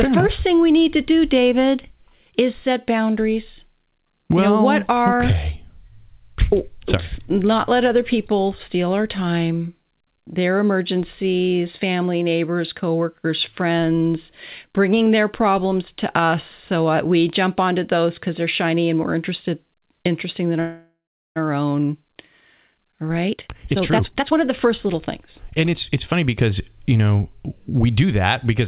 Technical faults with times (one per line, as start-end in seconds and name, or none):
20.60-21.38 call audio freeze
22.68-26.43 jitter buffer speed-up